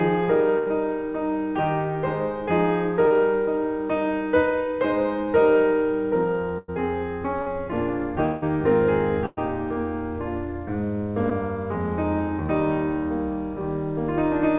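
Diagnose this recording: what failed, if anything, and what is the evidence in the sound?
Network stage, burst of packet loss, at 0.58 to 0.68 s, 6.58 to 6.70 s and 9.26 to 9.49 s. In each gap the music turns into a held, fading continuation of the last sound for roughly 80, 100 and 110 ms, then resumes further along with that span missing. Several consecutive packets failed to arrive in time, so the receiver extended the last good audio while attenuating it. The G.711 mu-law path keeps everything below 4 kHz, and these fills sit inside that band.

Network stage, short concealed packet loss, at 3.08 to 3.12 s, 7.42 to 7.48 s and 11.30 to 11.33 s. Each is a brief smear or wobble lasting 10 to 40 ms, where a small piece of the music blurs before the real signal blends back in. Packets missed the decoder's deadline, and concealment synthesised a short continuation from the preceding sound to bridge the hole.

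Network stage, at 8.26 to 8.44 s. The music is replaced by a fading extension of the last sound for about 160 ms, with no fall to silence. Playback then picks up later in the music with that stretch gone. The likely cause is a long network dropout, cut short before concealment ran out, so the receiver kept extrapolating and attenuating the prior audio across the whole gap.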